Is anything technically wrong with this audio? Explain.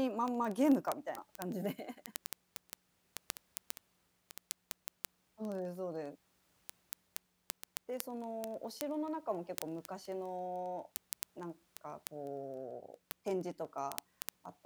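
Yes. Word clock ticks run from 0.11 s to the end of the speech. The receiving device is clocked independently rather than locked to the sender, and the two clocks drift apart by roughly several hundred parts per million. Each time they slip past each other, one sample is dropped or repeated and its neighbours are misread. The result is a steady train of hundreds of sharp ticks of uneven strength, roughly every 30 ms, running through the speech.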